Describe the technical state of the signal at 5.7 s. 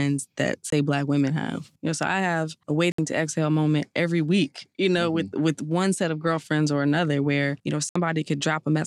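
At 5.7 s the speech signal is intact, with no fault present at that moment.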